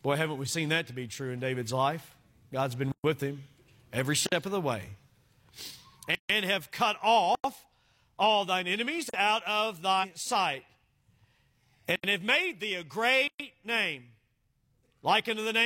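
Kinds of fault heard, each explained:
Block of digital silence: output samples went out as zeros, so this speech drops abruptly to nothing for about 40 to 147 ms, seven times.
Compressed frames skipped: whole compressed frames were never decoded, so near 10.0 s the speech leaps ahead by about three 46.4 ms frames.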